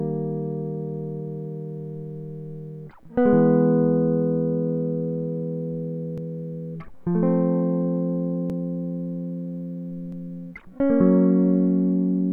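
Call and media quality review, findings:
Dropped buffer (overrun) at 6.18 s, 8.50 s and 10.12 s in the music: abrupt jump forward, no gap of silence. Roughly 50 ms missing at 6.18 s and 10.12 s, about three times that at 8.50 s. Likely capture-side overrun: the application read too late, the hardware overwrote the pending block, and the surrounding audio was spliced together directly.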